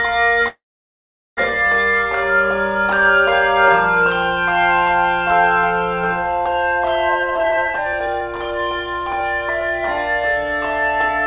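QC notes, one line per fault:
0.48–1.39 s, call audio freeze: the sound stalls, a brief fading tail, then about 0.78 s of silence. Likely a late-packet jitter-buffer underrun; playback resumes with nothing lost.
7.09–9.95 s, jitter buffer speed-up: plays about 131% fast at unchanged pitch, sounding hurried. Tiny pitch-period slices, roughly a second total, get trimmed to drain excess buffering.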